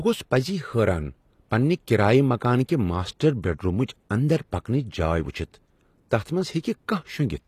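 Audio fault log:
Throughout, HE-AAC compression: the speech has plainly audible coding damage, with a treble that sounds bright yet synthetic, s sounds turning gritty and metallic, and nothing at all above 14.9 kHz. The likely cause is a codec that keeps only the lower spectrum and rebuilds the top by copying lower bands upward, which fits a bitrate near 24 kbps. Unlike plain low-bitrate AAC or MP3, which simply dull the highs, here the top end stays present but mismatched.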